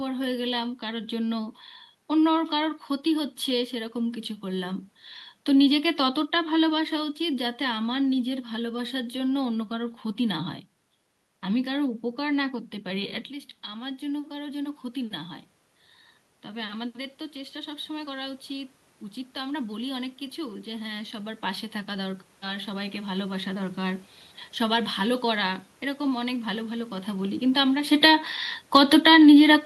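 From 27.55 s to the end at 29.7 s, the automatic gain control falls: having judged the input too loud or its background noise too strong, it pulls its gain down gradually, so the speech sinks steadily in level and the room noise sinks with it, while the talker also shifts position around 28 s.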